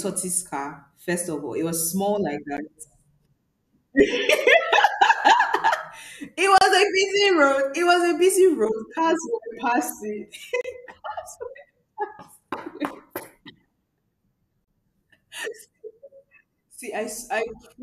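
Gaps at joins of encoded pieces cut into this speech at 2.57 s, right after "was small like," then at 6.58–6.61, 10.61–10.64 and 14.64–14.68 s, every 4 s. Separately encoded chunks were joined untrimmed, leaving 12 to 32 ms of encoder delay and padding as brief gaps with smeared edges.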